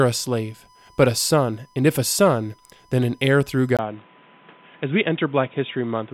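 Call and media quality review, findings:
USB whine: steady 1 kHz tone through the whole clip, about 35 dB below the speech. USB 1 ms frame current leaking via power or ground into mic path. Spectrogram: thin unbroken horizontal line at 1 kHz.

Likely input switched to a poorer device at 3.77 s: dull from there, 20 ms silence at switch, level about 5 dB lower, noise floor about 30 dB below speech. Spectrogram: blank column, then nothing above 3.8 kHz.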